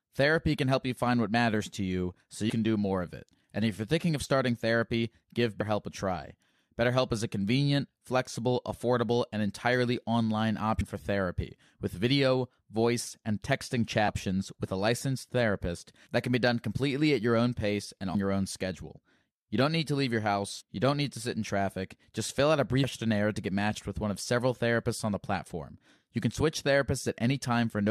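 Compressed frames skipped at 10.80 s, 20.60–20.62 s and 22.83–22.85 s: the speech jumps ahead by roughly 150, 100 and 200 ms of lost 23.2 ms frames.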